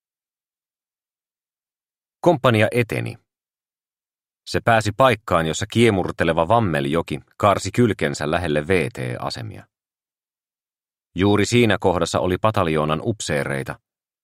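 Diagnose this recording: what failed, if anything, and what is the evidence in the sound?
Nothing in the recording stood out as a fault on listening, so no failed stage could be identified.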